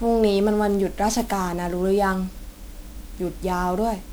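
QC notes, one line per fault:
Throughout, generation loss: the speech sounds swirly, hollow and smeared, with blurred attacks, beyond what a single pass at a rate fitting 128 kbit/s MP3 would leave. The likely cause is about seven MP3 re-encodes, each quantising on a shifted frame grid, compounding noise and spectral holes.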